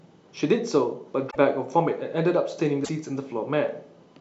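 A broken MP3 bit reservoir is the likely cause of two brief disruptions in this speech clip, at 1.29 to 1.36 s and 2.84 to 2.89 s, where the sound skips forward. With frames of 26.1 ms, each disturbance spans two or three frames. After frames go missing, the following frame reaches back for data it stored in earlier frames, finds bytes from the wrong frame, and decodes them into a chirp, a burst of noise or a short hole.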